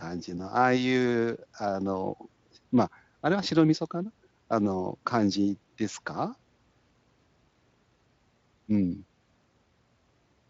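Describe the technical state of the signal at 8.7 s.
At 8.7 s the signal is intact, with no fault to be heard at that moment, only the light coloration of the Speex speech codec carrying the audio.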